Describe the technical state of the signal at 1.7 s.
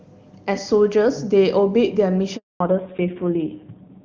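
At 1.7 s the speech is intact, carried by the AMR wideband (HD Voice) codec at 23.85 kbit/s with no fault to be heard.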